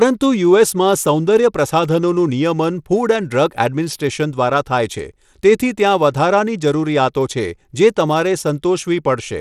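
From start to finish, the speech carries a gritty, coarse texture. Treble flickers, and nothing sounds above about 17.2 kHz. This is likely Bluetooth SBC compression at a low bit pool, fitting roughly 96 kbps. Starved top sub-bands drop out, and coarse quantisation adds the grain.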